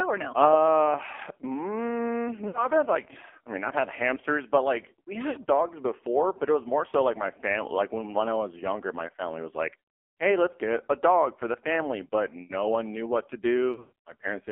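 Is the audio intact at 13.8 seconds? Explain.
No. From 13.72 to 13.92 s, just after "one knew what to", there are lost AMR speech frames. About 180 ms of audio is missing, scattered across 200 ms, which fits roughly nine 20 ms frames. The longest gap is 120 ms. The decoder covers each gap by reusing the last good pitch and vocal-tract settings at falling gain. The sound stretches into a smeared warble, sinks toward silence, and returns rough.

That moment also carries the AMR narrowband mobile codec, present throughout. The audio is confined to 300 Hz to 3.4 kHz, and the heavy, buzzy, synthetic coloring is consistent with a low mode near 5.9 kbps.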